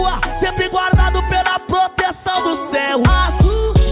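Nothing stood out as a technical problem on listening to this audio.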